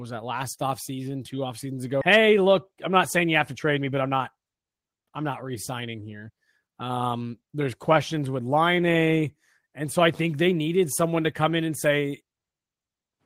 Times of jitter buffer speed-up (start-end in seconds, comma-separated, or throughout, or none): 2.13-6.46